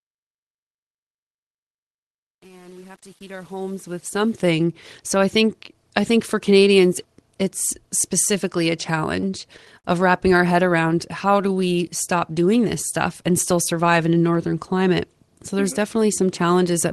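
Speech opens with a smooth fade over the first 4.5 s, but the fade suffers truncation distortion: from 0 to about 4.29 s the quiet level is stored with too few bits and no dither, which fits an 8-bit stage. The low-level sound turns gritty, and a zoomed waveform shows square staircase steps instead of smooth curves. Between 9.21 and 9.85 s there are repeated stalls (stutter): the call's jitter buffer ran dry five times, and the receiver stretched the last sound to fill about 87 ms, with the longest wait 50 ms. The speech drags and hiccups, and a spectrogram shows short smeared, repeated patches. From 11.25 to 11.61 s a jitter buffer slow-down adds 52 ms by repeating pitch periods, so the speech runs at about 87% speed with unchanged pitch. Harmonics appear stretched sideways on a spectrogram, within the roughly 12 kHz band of the Opus path.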